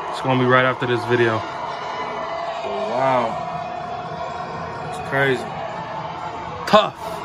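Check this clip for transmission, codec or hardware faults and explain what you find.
Nothing stood out on listening to the clip.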